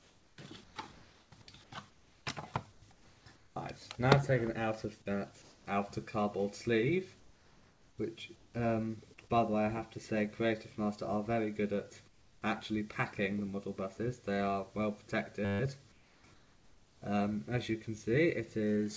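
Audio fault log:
0.00–3.56 s, 5.42–5.66 s, 7.20–8.54 s, 12.08–12.42 s, 15.92–17.02 s: comfort noise in place of the background. A steady, featureless hiss replaces the real background, likely from discontinuous transmission. On the spectrogram it appears as smooth, uniform noise bands, and at 5.42 s and 12.08 s it is about 2 dB and 7 dB quieter.
15.45–15.60 s: system hang loop. One 10 ms slice repeats 15 times, producing a 100 Hz buzz. The waveform shows identical repeating cycles, and the spectrogram shows harmonics at 100 Hz spacing.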